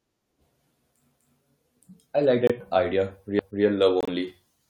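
Corrupt frame muted, at 2.47 to 2.52 s just after "I like" and again at 4.01 to 4.10 s: the speech drops abruptly into silence, once for about 40 ms and once for about 90 ms, which fits one and then three compressed frames. Damaged bits made the decoder reject those frames, so the player filled their slots with silence and kept the timing intact. Overlapping chunks, at 3.39 to 3.64 s: a 250 ms stretch of the speech plays twice, heard as a stutter at the join. Each processed chunk, apparently 2 s long, began before the previous one had finished, so the overlap was repeated.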